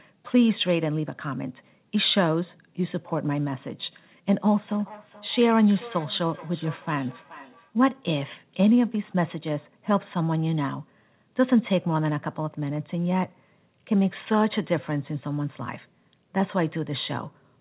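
From 4.6 to 7.73 s, feedback echo between two devices: speech returns roughly every 400 ms, about 21 dB below speech, seen as faint repeating copies on the waveform and spectrogram.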